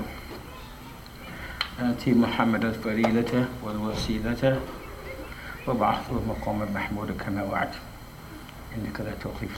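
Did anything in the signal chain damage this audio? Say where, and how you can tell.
No, nothing along the chain has left a mark on this audio that I can hear or point to. Every stage from capture through to playback appears to have passed the sound along without adding damage of its own.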